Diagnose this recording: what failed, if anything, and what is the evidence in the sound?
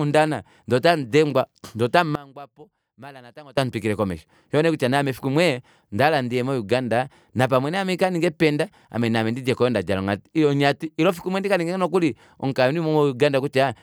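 From 2.15 to 3.57 s, after "ndee otamudengwa ndee otamu", speech drops about 22 dB to a faint residue. One channel inverted, likely wiring, cancels in mono.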